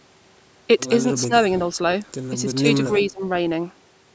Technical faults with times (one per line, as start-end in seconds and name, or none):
1.27-1.32 speech suppressed in double talk
2.87-3.23 speech suppressed in double talk